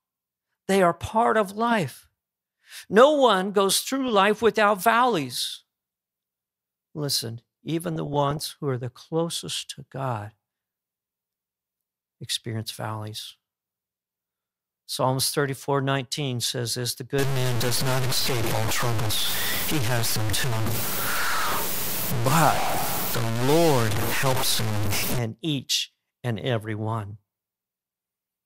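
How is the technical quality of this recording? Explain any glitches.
The speech carries two kinds of fault: repeated digital-radio burbling and a stretch of coarse, gritty distortion.

DAB burbling occurs at 4.08–4.41 s, 7.85–8.50 s, 16.68–16.75 s and 20.80–21.78 s. Uncorrected bit errors corrupt sub-band samples and scale factors, producing short noise blips and sudden level jumps in single sub-bands over the speech.

Low bit depth without dither runs from 17.19 to 25.19 s. Grainy distortion tracks the speech, with noise nearly as loud as the signal, likely from undithered truncation to very few bits.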